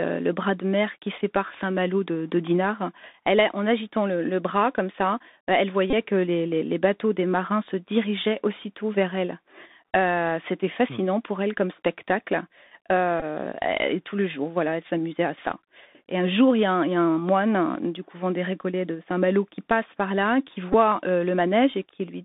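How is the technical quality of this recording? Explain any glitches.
The recording has been through a narrowband Bluetooth headset link, and there are three brief packet-repeat glitches.

The Bluetooth CVSD headset codec affects the whole clip. The speech is confined to roughly 200 Hz to 3.7 kHz, giving it a thin, telephone-like quality. CVSD encodes one bit per sample at 64 kbps, signalling only whether the waveform rises or falls, with an adaptive step size. Loud, fast-changing high content outruns that step, so sibilants turn scratchy, and a granular hiss sits under the speech. The codec damage is plainly audible.

A Bluetooth headset packet repeated occurs three times. At 5.90 to 5.94 s, between "bras comme ça elle" and "que les bateaux des", about 26 ms of audio was lost, which fits seven 3.75 ms packets. The decoder replayed the last good packet's bits, so the repetition every 3.75 ms produces a short buzz near 267 Hz. 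A shorter buzz of about 15 ms follows at 13.20 to 13.23 s. At 20.73 s, just after "passe par là qui", an 11 ms repeat gives a brief buzz.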